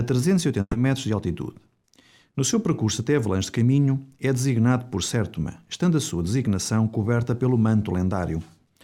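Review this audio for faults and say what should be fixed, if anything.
A burst of packet loss hits between 0.61 and 0.75 s. About 120 ms of audio is lost, so the receiver stretches the last sound for that long while fading it down. Roughly 40 ms of silence follows, and then the audio resumes further on, with that 120 ms missing. On a spectrogram, the frequency bands just before the gap extend horizontally and dim, then a short dark strip gives way to an abrupt restart. The waveform shows the last sound continuing and shrinking in amplitude before a flat stretch. Forward error correction or a deeper jitter buffer would help recover losses of this length.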